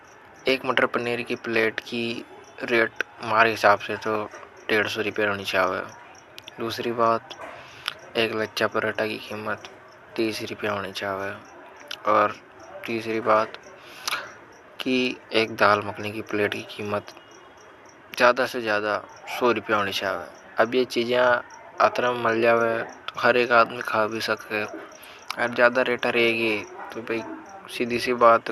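Nothing stood out on listening to the speech here; no fault could be heard at any point.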